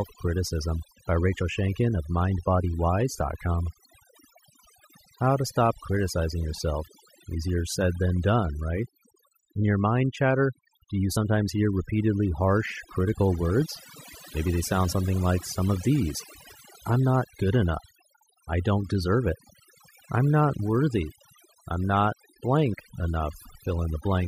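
From start to finish, overdone noise removal is applied to the speech. Bands near the noise floor get cut hard. The background becomes twinkling near-silence.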